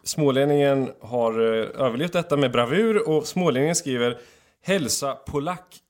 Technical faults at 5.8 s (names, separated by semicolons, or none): sudden gain jump